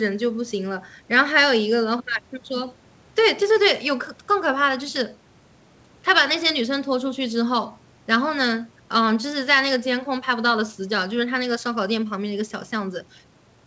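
Nothing goes wrong anywhere in this speech clip; it simply carries the narrow sound of a normal call, with the lowest bass trimmed by the microphone processing and nothing above 8 kHz, which fits a wideband codec such as G.722.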